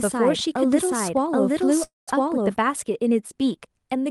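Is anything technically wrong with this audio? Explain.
Yes, there are two faults in this speech clip.

A doubled audio track runs from the start to 2.56 s. A second full-band copy of the speech sits roughly seven-tenths of a second behind the original, at about the same level, with no decay or room colouring. It is likely caused by the audio being picked up a second time through a slower path. It sounds like a flat, dry echo throughout that opening stretch and cuts off abruptly at 2.56 s.

A call audio freeze occurs from 1.83 to 2.09 s. The sound stalls for about 240 ms. The last sound is carried on briefly as a fading buzz or hiss, then goes silent for roughly 170 ms. It is likely caused by packets being held up in transit so the jitter buffer ran dry. When they arrived, the speech resumed exactly where it stopped. Nothing was lost, but everything after it now runs about 240 ms late.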